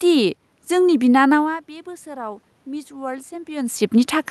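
Automatic gain rising, from 1.39 to 4.03 s: around 1.5 s the talker drifts away from the microphone and the speech level falls by about 17 dB. The gain control registers the quieter input and slowly raises its gain by about 7 dB over more than two seconds, so the voice and the room noise swell together. This makes up only part of the drop, and the talker moves again near 3.5 s.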